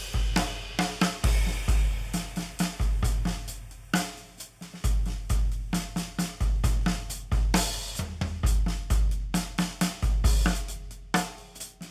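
No technical faults are audible.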